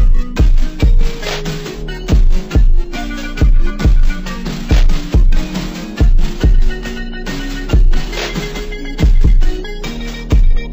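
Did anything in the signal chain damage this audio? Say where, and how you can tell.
Yes. A stereo read as mono fault occurred at the sample-format conversion stage. It affects the whole clip. Everything plays at half speed and a full octave low. A fainter mirrored copy sits in the upper half of the spectrum. Interleaved left and right samples were read as one channel.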